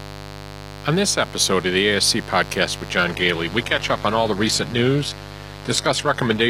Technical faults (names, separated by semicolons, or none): mains buzz; adaptive stream at a lower bitrate